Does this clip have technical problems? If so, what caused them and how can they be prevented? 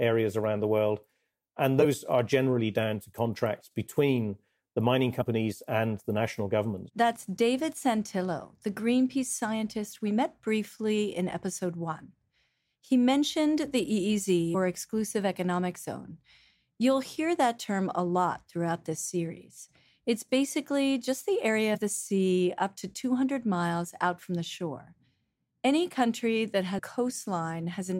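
Yes. Compressed frames skipped: whole frames of the coded speech went missing or were rejected as damaged, so the audio jumps ahead roughly 50 to 150 ms at 1.79–1.85, 5.20–5.22, 14.54, 21.74–21.78 and 26.77–26.80 s. Checksum-verified storage and transfer, with corrupted data re-sent, prevents this.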